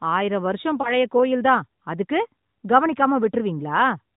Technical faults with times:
0.82-0.93 lost AMR speech frames

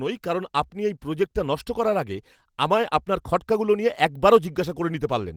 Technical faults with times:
none

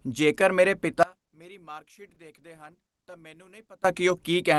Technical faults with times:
1.03-3.84 one channel inverted
2.14-2.18 short stall from a late packet

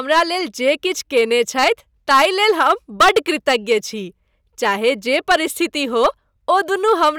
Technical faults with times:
0.00-7.18 hard clipping

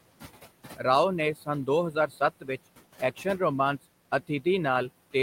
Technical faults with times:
0.00-5.23 noise suppressor artifacts
1.35-1.48 speech cut by the noise suppressor
1.92-2.49 speech cut by the noise suppressor

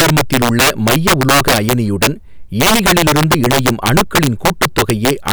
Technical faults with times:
0.00-5.33 integer overflow

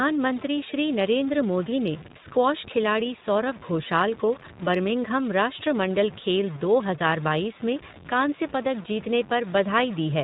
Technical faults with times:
0.00-10.24 low bit depth without dither
0.00-10.24 iLBC codec

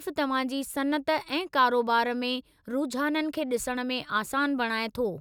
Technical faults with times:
none

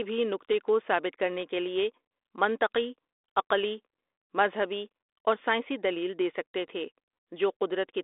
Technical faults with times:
none

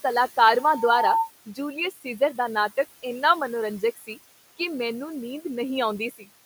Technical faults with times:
0.00-6.45 noise suppressor artifacts
0.55-1.32 loudspeaker feedback squeal
1.91-2.21 speech cut by the noise suppressor
3.81-4.18 speech cut by the noise suppressor
6.11-6.24 speech cut by the noise suppressor

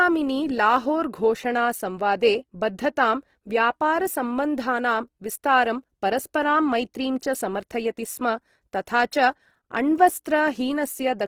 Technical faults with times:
0.00-11.27 Opus compression

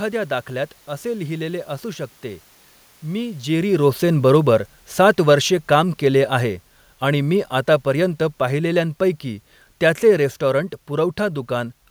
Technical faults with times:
4.04-9.21 automatic gain falling

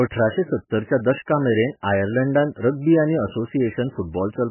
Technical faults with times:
0.00-4.51 MP3 compression

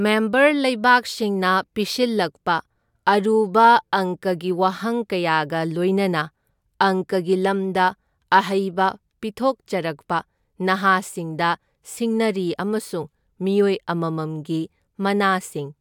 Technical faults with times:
none

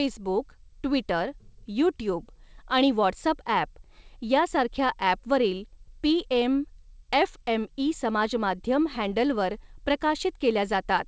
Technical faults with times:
none

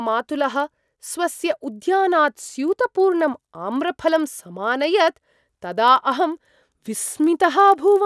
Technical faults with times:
0.00-8.05 resampler restarted on every block

